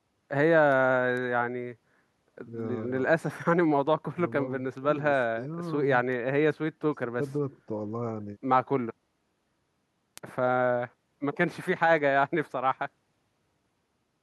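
From 0.27 s to 13.78 s, sharp word clock ticks recur about every half second, some thirty in all. The receiving device runs unlocked from the sender's clock, roughly 50 ppm apart. Each slip drops or repeats a single sample. The ticks vary in strength.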